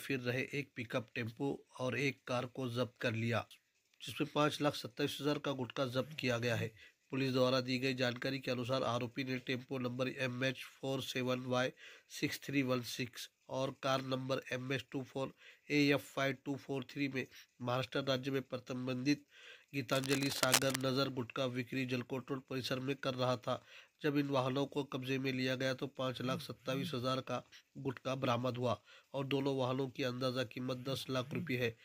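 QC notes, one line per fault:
19.91–20.82 s, cable scratch noise: dense, uneven scratchy rustling about as loud as the sound itself, likely from a worn cable or connector being moved.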